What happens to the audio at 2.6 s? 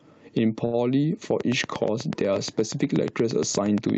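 At 2.6 s a train of clicks is running, from 1.41 s to the end: evenly spaced, near-identical ticks about 8.5 per second, roughly 10 dB above the speech, likely from interference. Their steady spacing sets them apart from random crackle. Gain pumping is also present: the gain swings by about 10 dB under loud speech, likely from excessive gain driving a fast limiter.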